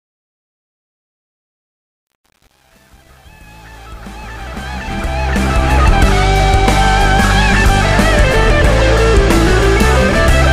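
The audio opens with a fade-in from near the very start to 5.84 s, and that fade carries truncation distortion throughout, from 0.0 to 5.84 s. The worst of it runs from 0.0 to 4.79 s, where the low level reduces the waveform to a few coarse square steps, so the sound turns gritty. The coarseness fits a gain stage keeping about 8 bits without dither, leaving the quietest part of the ramp badly quantised.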